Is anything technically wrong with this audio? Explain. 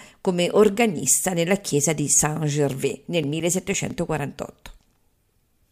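Yes. From 2.73 to 4.24 s there are CD scratch ticks: a surface blemish defeats the disc's error correction on each rotation, so the player patches or mutes the damaged samples. In the speech this gives ten brief ticks, about six a second, each only a few milliseconds long.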